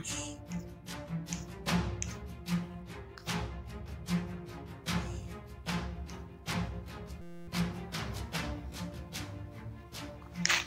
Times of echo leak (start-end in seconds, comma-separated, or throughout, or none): none